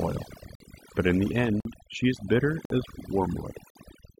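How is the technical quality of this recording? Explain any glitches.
The technical quality is weak: the speech has been over-processed for noise and is also broken up by regular dropouts.

Overdone noise removal runs through the whole clip. Noise reduction set far too aggressively has pushed frequency bands near its noise estimate right down, taking softer parts of the voice with them. You can hear it as an unnaturally dead background with little twinkling specks in it.

Then there's a gap between chunks, four times: 0.55 to 0.60 s, 1.60 to 1.65 s (right after "in the", before "she is bitter as"), 2.65 to 2.70 s (just after "she is bitter"), and 3.70 to 3.75 s. Each is a 50 ms hole, spaced 1.05 s apart, so the audio was handled in one-second blocks with silence inserted at each join. Nothing's missing, but you get little interruptions at a steady rhythm.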